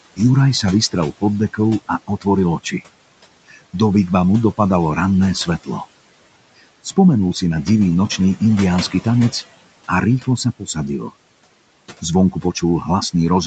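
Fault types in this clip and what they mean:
Noise suppressor artifacts: noise sinks about 18 dB in pauses and returns under speech, as the suppressor attenuates noise-like bands frame by frame.
Speech cut by the noise suppressor: from 3.48 to 3.74 s, before "vigvamu dopadalo ranné svetlo", speech sounds swallowed, dipping up to about 15 dB, mistaken for noise.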